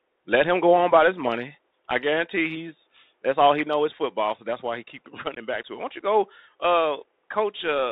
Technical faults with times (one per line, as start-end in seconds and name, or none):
0.00-7.92 Bluetooth CVSD headset codec
5.35-5.38 unconcealed Bluetooth headset packet loss